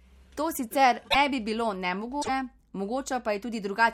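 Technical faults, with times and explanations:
1.09–1.16 s and 2.21–2.29 s, broken MP3 bit reservoir: the sound jumps ahead into a short chirp, burst of noise or hole, just before "bi bilo" and again just after it, each about three 26 ms frames long, likely from dropped frames whose successors decoded borrowed bytes belonging to other frames.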